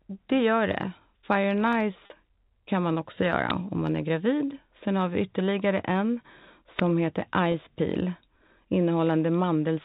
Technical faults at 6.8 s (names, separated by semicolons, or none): uninitialised buffer